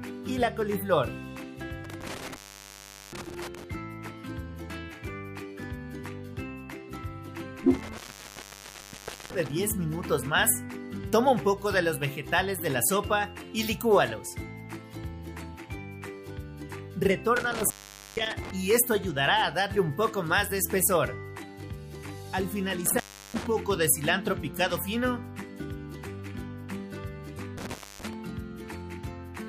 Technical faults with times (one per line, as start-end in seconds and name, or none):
1.85-3.64 intermittent contact
7.74-9.54 intermittent contact
17.36-18.51 intermittent contact
22.86-23.47 intermittent contact
27.58-28.13 intermittent contact